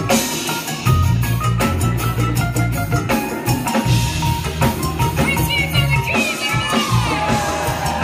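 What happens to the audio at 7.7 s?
Nothing goes wrong at 7.7 s; the audio plays through that moment intact, with no dropout, click or other disturbance.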